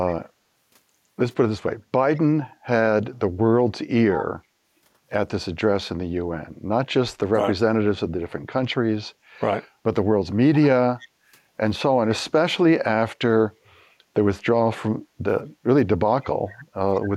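Speech, with four short, faint repeats of the voice trailing it by 160 ms, at 2.15–2.21 s, 10.62–10.67 s, 10.99–11.08 s and 16.94–17.0 s, sitting roughly 20 to 35 dB under the talker. This is an echo leak, likely from a loudspeaker on the far end whose echo canceller let part of the returning sound through. The room background also dips briefly, by about 9 dB at 11.08–11.24 s and about 11 dB at 15.08–15.21 s, for roughly 150 ms and 100 ms respectively before recovering. This is background gated by the echo canceller, which clamped the microphone down while the loudspeaker was active.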